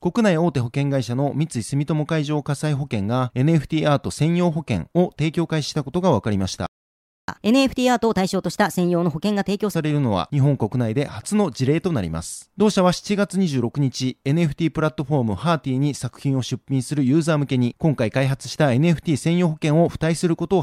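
Speech with a playback stall from 6.66 to 7.28 s: the sound cuts off mid-flow and leaves about 0.62 s of dead silence, a flat gap in the waveform and a blank vertical band on a spectrogram, likely because the player ran dry of buffered data or its thread was blocked. From 7.28 to 9.76 s comes catch-up at higher speed, played 1.25 times fast to recover the lost time. The voice rises by roughly four semitones, so harmonics shift upward and syllables compress on the spectrogram before dropping back to normal.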